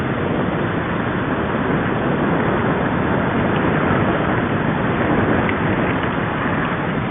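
Listening through the recording, nothing stood out as a technical problem at any point.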